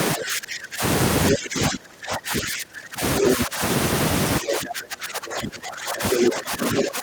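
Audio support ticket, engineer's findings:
Speech suppressed in double talk at 0.15–0.83 s, 1.31–3.03 s, 3.2–3.62 s and 4.4 s to the end. The talker dips by roughly 15 to 30 dB in chunks, likely the echo canceller ducking everything during overlap.

Other side's voice leaking through as short scraps at 1.32–1.36, 3.17–3.3, 6.15–6.24 and 6.78–6.83 s, about as loud as the talker, last one a touch quieter. Likely residual loudspeaker echo the canceller missed.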